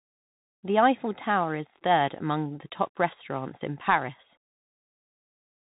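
Speech throughout sounds narrow and gritty, with nothing above 3.8 kHz, scratchy s sounds and a granular hiss: Bluetooth CVSD headset codec, whose one-bit adaptive steps can't track sharp high detail.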